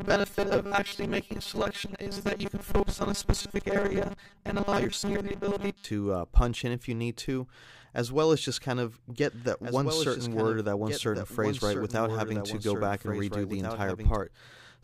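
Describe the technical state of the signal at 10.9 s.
At 10.9 s the signal carries a doubled audio track, running from 9.10 to 14.16 s: a second full-band copy trails the original by about one and a half seconds, roughly 5 dB quieter, with no decay or room colouring. It is likely a second capture path or a misaligned edit. It sounds like a dry, distinct repeat. On a spectrogram, each pattern reappears as a fainter duplicate shifted right; the waveform shows overlapping envelopes starting and stopping abruptly.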